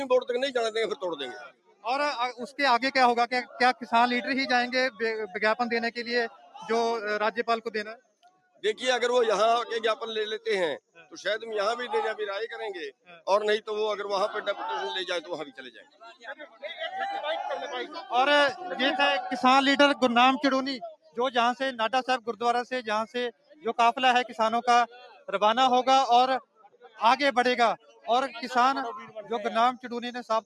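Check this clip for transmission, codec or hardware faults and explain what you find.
The clip has one processing fault, a speech noise suppressor running over non-speech audio, which causes both a constant level swing and several deeper cuts.

Noise suppressor applied to music or sounds, throughout: a suppressor built for speech treats steady tones, ambience and tails as noise and pulls them down while attacks pass. The result is a level that pumps and flutters, swinging by around 10 dB.

Sound cut by the noise suppressor, at 1.37–8.63 s, 10.88–11.16 s, 12.91–13.27 s, 15.5–16.64 s and 20.92 s to the end: here the suppressor judged sustained or decaying sound as noise. Held parts sink by up to about 18 dB and decays end early. The cuts total roughly two seconds in the first and last spans and a fraction of a second to a second elsewhere.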